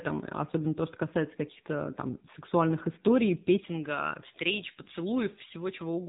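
From the very start the speech carries the AMR narrowband mobile codec sound. Nothing gets through above about 3.8 kHz, so it's boxed into that old phone band. The codec models the voice as a vocal-tract filter fed by a handful of pulses per sub-frame. At this low rate, which fits the 7.4 kbps mode, that model is stretched thin, and the damage is plainly audible: a buzzy, synthetic edge on the voice.

Then at 3.58 s, right after "там сексуальных историй", you get pre-emphasis left on through to the end. The treble lift that's normally undone on playback never got its matching cut. The curve fits J.17, which puts about 11 dB more at 10 kHz than at 1 kHz. The band stops near 3.8 kHz, so what you hear is the upper part of the remaining range tilted up. The voice turns thinner, brighter and more hissy on sibilants than before.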